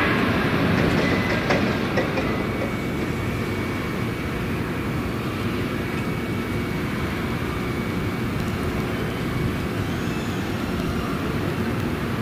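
From 6.71 s to 12.10 s the audio is hit by periodic USB or driver dropouts: roughly every 0.1 s, a tiny slice well under a millisecond is blanked to silence, about fifty times in all. Something is stalling the bus or driver on a fixed schedule. The result is a steady ten-per-second ticking that follows the signal. Random clicks or packet loss would land unevenly, but these gaps keep exact, machine-like spacing.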